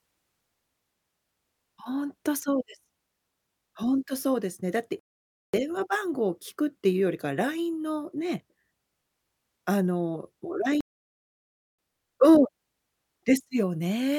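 At 4.99 s the speech cuts out for about 0.54 s, and at 10.81 s for about 0.98 s. Each is a playback stall, likely from the player starving for data. The waveform drops to a flat line and the spectrogram shows a blank vertical gap before the speech resumes.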